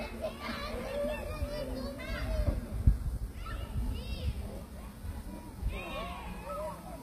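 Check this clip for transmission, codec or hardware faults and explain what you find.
There is one codec fault, present throughout: HE-AAC compression is the likely cause of plainly audible damage to the treble. The codec kept only the lower spectrum and rebuilt the top by copying lower bands upward, so the upper harmonics misalign and the highs sound gritty and metallic. That points to a very low bitrate, around 24 kbps. On a spectrogram the upper region looks like repeated, blocky copies of lower bands, cut off sharply at 15.4 kHz.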